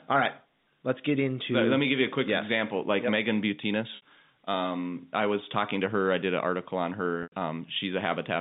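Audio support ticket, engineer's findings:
Packet loss with pitch repetition, 3.96 s: 60 ms gap bridged by a repeated last pitch period, a brief held buzz. Jitter buffer/concealment; fits two 30 ms packets. Waveform: identical cycles copied, envelope tapering. Spectrogram: harmonics frozen flat.

Same fault, 7.23 s: 90 ms loss, repetition fades toward silence, then a short cross-fade back in. Points to three packets. Flat harmonic stripes dimming to a gap, all within the 150 to 3700 Hz G.711 band.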